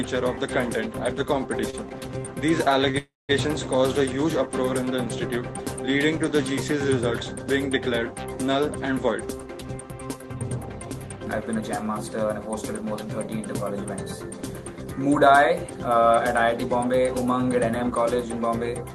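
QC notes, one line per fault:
1.55 to 2.96 s, scattered short gaps: about four brief holes across this stretch, the longest around 30 ms, each patched by extending the preceding sound. Together they cover roughly 5 percent of the span. They come through as small ticks and smears, not dropouts.
2.98 to 3.31 s, call audio freeze: the sound stalls for about 309 ms, first as a fading continuation of the last sound, then about 190 ms of silence. A likely held-up packet stream emptied the jitter buffer. Nothing is lost; the audio resumes where it stopped.
9.16 to 11.72 s, jitter buffer speed-up: playback runs at about 112 percent speed with unchanged pitch, sounding hurried. The receiver trimmed short pitch-period pieces, around 300 ms in all, to shrink a backlog built up in the buffer.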